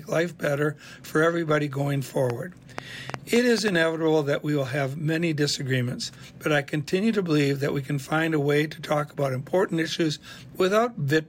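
Likely interference or a faulty connection injects a train of clicks, 2.30–3.69 s: about seven irregular pops, 4.35 per second, well above the sound.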